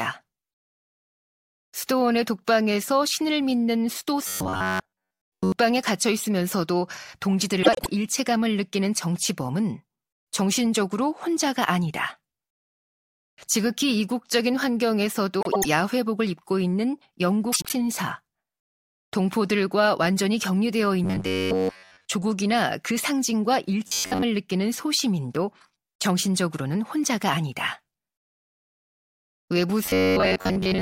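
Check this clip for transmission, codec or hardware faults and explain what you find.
Two kinds of fault are present: robotic sound from repeated short buffers in four stretches, and frames out of order in three places.

Robotic sound from repeated short buffers, at 4.28–5.52 s, 21.04–22.08 s, 23.87–24.23 s and 29.86 s to the end: fresh audio likely arrived too slowly, so the playback repeated a tiny buffer of about 10.7 ms, skipping most of the real signal. The speech becomes a rigid metallic buzz at 93.8 Hz, loosely tracking the syllables.

Frames out of order, at 7.62–7.87 s, 15.41–15.65 s and 17.52–17.73 s: two adjacent runs of frames were decoded in swapped order, about 105 ms each in the first two and about 78 ms in the third. Each stretch flutters garbled, losing no time.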